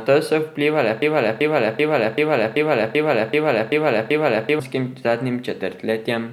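From 1.02 s to 4.60 s the speech falls into a broken-record loop: one chunk of about 385 ms plays nine times back to back. Most likely the player or stream stalled and kept resending its last buffer, so whatever came next is simply gone.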